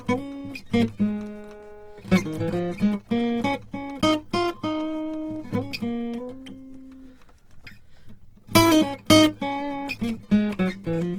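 Across the whole music clip the tones sound noisy, rough and grainy, with the likely cause being Opus compression in its music (CELT) mode. The energy in each band is preserved, but the encoder has too few bits for the detail, so it fills bands with folded copies of lower ones or with noise. The bandwidth stays full, reaching about 20.2 kHz, and the damage is plainly audible, which fits a low rate around 16 kbps.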